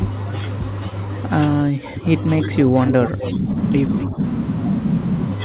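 The speech dips sharply between 1.63 and 2.07 s, by as much as about 25 dB, then sags by about 10 dB from 2.47 to 3.56 s and again from 4.08 to 4.19 s. This is likely speech suppressed in double talk: with both sides talking at once, the echo canceller turned the near voice down along with the echo it couldn't separate. A delayed copy of the voice, 257 ms late and only about 5 dB below it, comes through from 2.86 to 3.28 s, with a short scrap about 10 dB down at 4.01 to 4.06 s. That is likely echo leak from a loudspeaker-side canceller that let part of its microphone pickup back into the call. The sound is band-limited to 4 kHz, which fits a narrowband G.711 call path.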